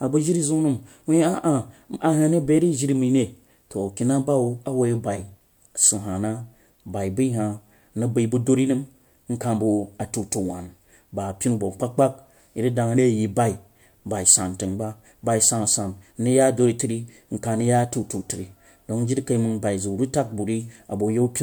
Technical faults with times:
none

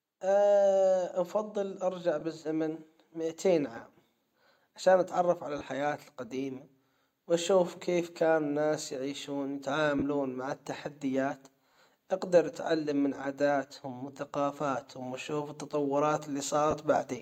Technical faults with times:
2.20 lost LE Audio frames
5.58-5.61 lost LE Audio frames
7.25 lost LE Audio frames
9.99-10.02 lost LE Audio frames
11.74-11.76 lost LE Audio frames
13.24 lost LE Audio frames
16.71-16.73 lost LE Audio frames

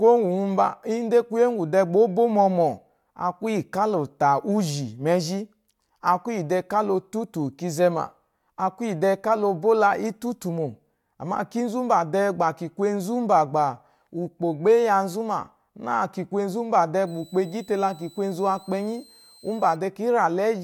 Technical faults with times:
17.07-19.76 switching supply whistle

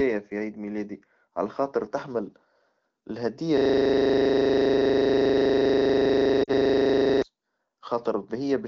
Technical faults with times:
3.57-7.22 system hang loop
6.44-6.51 lost AMR speech frames

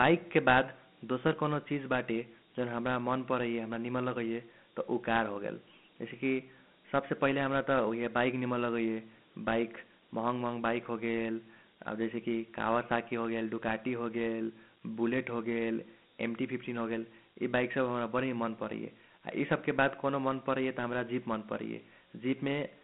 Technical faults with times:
0.00-22.83 Dialogic VOX ADPCM

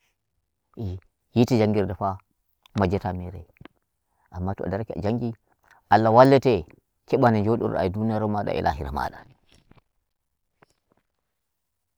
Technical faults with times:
none

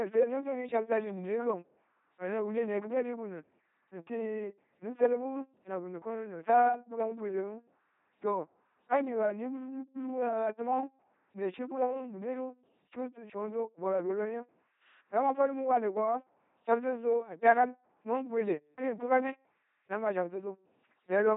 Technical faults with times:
0.00-21.36 LPC-10 vocoder

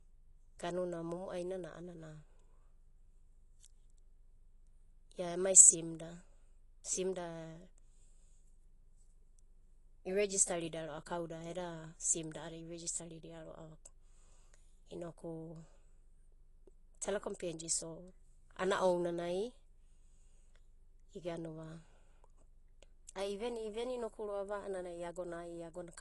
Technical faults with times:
0.00-26.01 AAC compression

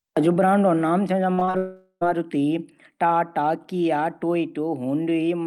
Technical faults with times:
1.33-1.55 repeated packet loss (robotic sound)
1.57-2.03 long network dropout

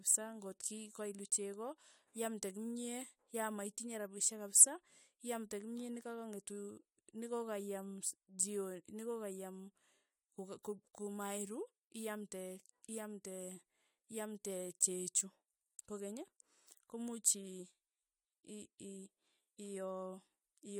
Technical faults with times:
none

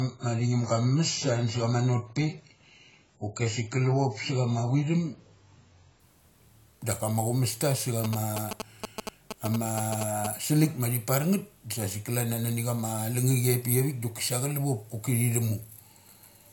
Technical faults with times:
0.00-6.00 adaptive stream starting at a low bitrate
8.04-10.27 GSM signalling bursts

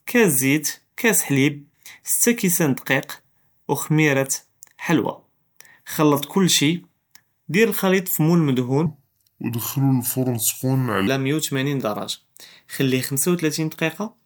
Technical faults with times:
8.86-11.07 section at the wrong speed

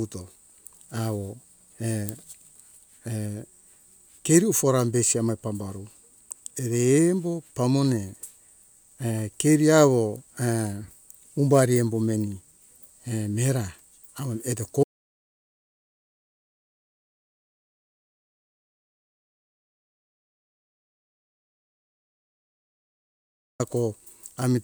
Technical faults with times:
14.84-23.60 audio dropout to silence

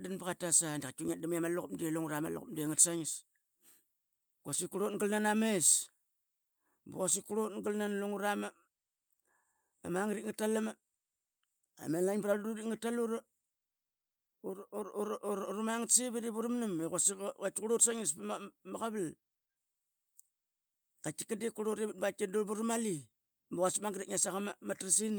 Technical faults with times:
0.00-25.18 clock drift between sender and receiver
0.44-25.09 repeated timing corrections

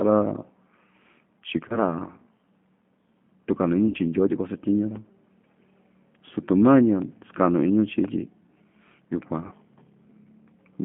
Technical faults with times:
0.00-10.84 G.729 codec
1.68-1.78 VoIP packet loss concealed by the speech codec
3.88-3.97 VoIP packet loss concealed by the speech codec
9.47-9.54 VoIP packet loss concealed by the speech codec

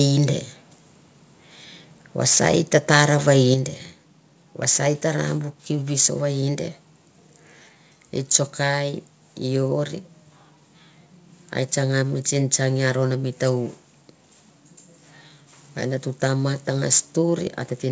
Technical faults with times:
3.54 microphone volume stepped down

